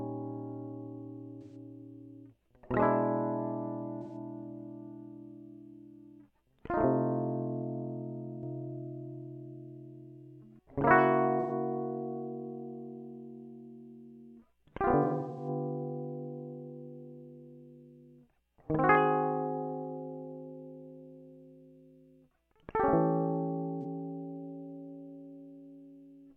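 Around 1.42, 4.02 and 11.40 s, then 15.02 to 15.48 s and 23.82 s, there's AAC frame loss with concealment. The decoder patches missing stretches from the last good spectrum, so the music briefly smears and goes phasey. It's worst at 15 s, where gaps of up to roughly 150 ms scatter across a third of a second.

From 8.43 to 10.59 s there's a doubled audio track: a dry full-band copy at about the same level, trailing roughly 300 ms behind and cutting in and out abruptly. It's most likely a second capture path or a misaligned edit.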